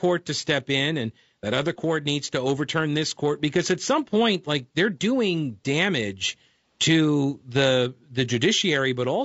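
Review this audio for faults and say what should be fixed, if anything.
Low-delay AAC compression runs throughout the speech: rough, grainy texture with noise filling the gaps between harmonics, likely AAC-ELD at a bitrate fitting around 32 kbps. Prevent it by raising the call bitrate.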